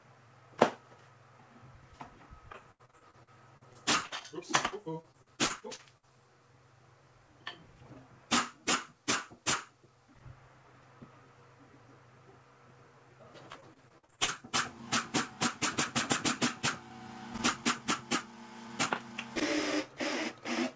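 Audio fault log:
2.52–4.23 s, 4.67–6.05 s, 13.53–14.30 s: repeated packet loss (robotic sound). Rapid successive holes, the longest 78 ms, each patched by stretching the previous sound. The result is a choppy stutter rather than one clean dropout.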